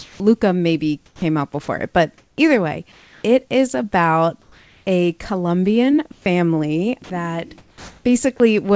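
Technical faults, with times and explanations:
0.00–0.20 s, 2.92–3.24 s and 4.42–4.86 s, comfort noise in place of the background: In these pauses the room tone becomes a smooth, featureless hiss lasting 0.2 s, 0.32 s and 0.44 s. It sits about 33 to 35 dB below the loud speech and is level with the real background in the first gap, about 1 dB quieter in the second and about 2 dB quieter in the third. The likely cause is discontinuous transmission. The sender stops sending while it hears no speech, and the receiver fills the gap with synthetic noise roughly matched to the background's spectrum.
0.18–0.20 s, onset clipped by the voice detector: The speech that follows the opening pause starts abruptly, missing about 20 ms of its soft rise and coming straight out of the synthetic hiss. This is likely a voice detector that reacted late to the returning speech. The first fraction of the sound was never sent, so the receiver kept playing comfort noise until transmission resumed.
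1.06–2.38 s and 7.04–8.40 s, sound chopped by the voice detector: Across both stretches the speech turns choppy. Parts of the speech drop out. About 380 ms is replaced in the first stretch and about 540 ms in the second. This is likely the detector toggling between sending and not sending more than once within each span, with comfort noise inserted every time it stops.
6.12–6.26 s, sound dropped by the voice detector: The speech gives way to steady hiss for 140 ms, taking about 60 ms of speech with it, then returns. This is likely the detector misjudging the speech as background and halting transmission until the level rose enough to retrigger it. The band-limited sound of the call path is heard through all of this, with nothing above 8 kHz, which points to a wideband call codec such as G.722.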